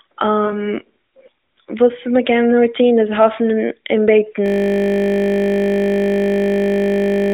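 Speech carried over an AMR narrowband mobile codec, band-limited to roughly 250 Hz to 3.7 kHz, with light codec colouring consistent with the 12.2 kbps mode. From 0.46 to 0.71 s there are lost AMR speech frames. About 40 ms of audio is missing, which fits two dropped 20 ms frames. The decoder conceals the gap by reusing the last good pitch and spectral envelope at falling gain, so the speech smears and dips briefly before recovering. After "איז האפן און בעטן", at 4.46 s, a system hang loop begins. A single 20 ms segment repeats exactly until the end of the clip, producing a steady 50 Hz buzz. This points to a frozen host or driver while the audio hardware kept cycling through the same ring buffer.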